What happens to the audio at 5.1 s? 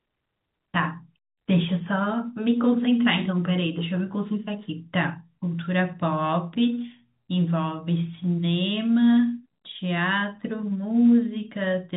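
Nothing goes wrong at 5.1 s: the speech carries on intact through that moment, with the narrow telephone band of G.711 coding cutting off everything above about 3.8 kHz, just as it does around it.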